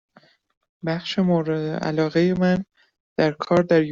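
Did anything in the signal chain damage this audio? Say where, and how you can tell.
No, nothing in the signal chain has left audible damage on this speech recording at any stage.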